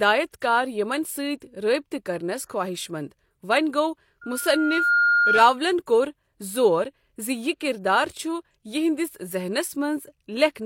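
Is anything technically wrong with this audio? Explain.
Yes, the speech has two kinds of fault.

Pre-echo occurs at 0.40 s, just before "کار یِمن", and again from 2.45 to 2.50 s. The transform codec spreads quantisation noise across a block, so noise meant for a sharp onset also fills the quiet instant before it. Here the hiss runs about 17 ms and then 45 ms ahead of the attack, softening it. Unlike reverberation or echo, which trail a sound, this smear arrives before the onset.

A loudspeaker feedback squeal runs from 4.21 to 5.61 s and stops just before "کوٚر زور". The microphone hears the loudspeaker it feeds, and at 1.4 kHz the loop gain exceeds one, so that frequency reinforces itself. The tone swells over roughly three-quarters of a second to around 5 dB above the speech. A steady hum or test tone would sit at a fixed level, but this single pitch grows on its own.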